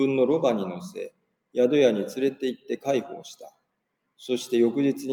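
Throughout, the level pumps and flutters by a few decibels, with sustained parts and decaying tails sinking while sharp onsets pass through. This is a noise suppressor applied to music or sounds: a speech-tuned processor treats steady, held energy as noise and keeps pulling it down.

From 1.1 to 1.35 s, one sound is cut by the noise suppressor. It dips by about 19 dB at its deepest, and it sinks for roughly a fifth of a second. The processor mistook that sound for background and cut it harder than the rest.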